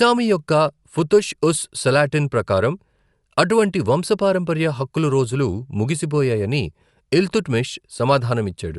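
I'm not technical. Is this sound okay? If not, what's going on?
No. For the whole clip the speech sounds dull and rough, with a fluttering haze around it. This is most likely Dolby Digital compression. To save space, the encoder discards everything above about 11.5 kHz, which removes the crisp top end. It also gives too little detail to many of the remaining frequencies, and the decoder fills those gaps with noise. That produces the grainy, wavering texture you can plainly hear.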